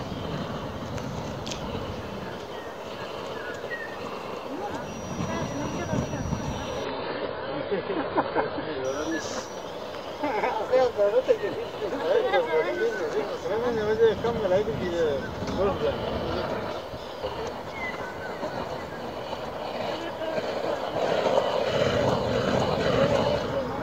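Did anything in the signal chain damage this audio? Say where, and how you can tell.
Yes. From 6.85 to 8.85 s the treble vanishes above 5 kHz and artefacts thicken, with no gap. This is an adaptive stream at a lower bitrate, which fits a network-driven switch to a much lower-bitrate encode.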